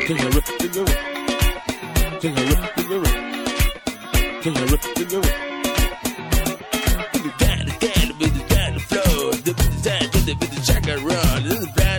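Nothing stood out on listening to this recording.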